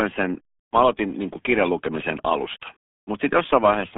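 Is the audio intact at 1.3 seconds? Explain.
No. The RealAudio 14.4 codec runs through the whole clip, including 1.3 s. Speech squeezed through what sounds like an 8 kbit/s dial-up codec keeps only about 200 Hz to 3.5 kHz, nothing above 3.7 kHz, leaving it muffled and heavily gargled.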